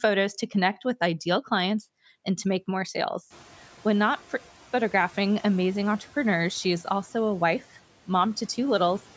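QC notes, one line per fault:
3.30–3.67 s, noise suppressor catching up: room noise jumps up and leaks through lightly reduced, then sinks about 5 dB over 370 ms as the suppressor's estimate adapts.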